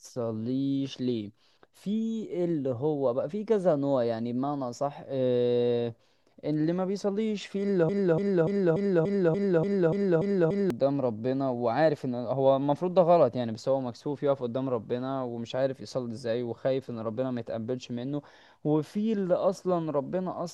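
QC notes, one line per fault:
7.89–10.70 s, broken-record loop: playback likely stalled and resent its last 0.29 s fragment, repeating it ten times back to back while the intended speech was lost.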